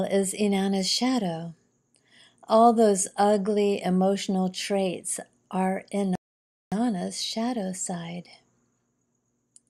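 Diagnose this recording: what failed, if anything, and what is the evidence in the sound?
Rebuffering stall at the playback stage: after "ugly emotional traits are" the speech goes silent from 6.15 to 6.72 s, then resumes at "shadow side" exactly where it stopped. The player ran out of downloaded audio and waited, adding 0.56 s. Unlike a dropout, nothing is lost.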